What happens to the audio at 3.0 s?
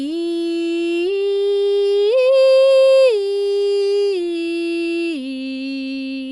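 At 3.0 s, as throughout the music, the sound is dull and rough, with fluttering noise around tones, likely from Dolby Digital compression at a low bitrate consistent with about 64 kbps. Starved frequency lines are refilled with dither noise, and a spectrogram shows nothing above 11.5 kHz.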